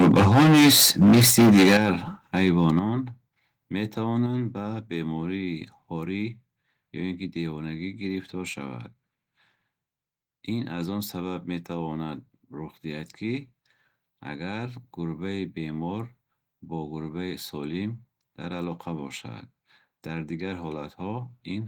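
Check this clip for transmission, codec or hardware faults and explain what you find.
Two hardware-side faults appear: microphone overload and microphone volume stepped down, occurring together in the first few seconds.

Microphone overload runs from 0.0 to 1.9 s, about 14 dB over full scale with roughly a third of samples flattened, and again from 2.37 to 2.79 s, about 2 dB over. The likely cause is input gain set too high, so peaks hit the converter ceiling and crackle harshly. A codec artefact would sound smeared rather than crackly.

Microphone volume stepped down at 1.77 s (about 11 dB), 2.79 s (about 7 dB) and 4.26 s (about 4 dB). These are clean, sudden drops in both voice and background, likely from the call software reducing input gain.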